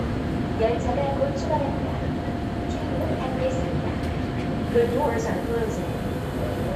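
No technical faults can be heard in this recording of sounds.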